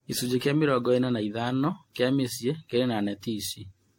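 Across the speech the sound is swirly, smeared and hollow, with blurred consonant attacks: generation loss, likely from around seven lossy passes fitting AAC-LC at 64 kbit/s, each requantising on a shifted frame grid. A spectrogram shows nothing above 16.6 kHz and patchy holes, and waveform transients look softened.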